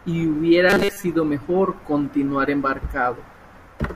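From about 0.70 to 1.04 s, just before "mejor continuar", the speech goes robotic, a rigid metallic buzz at 200 Hz. That's likely repeated short buffers: a 5 ms slice looping while fresh audio arrived too late, so most of that stretch is repeats.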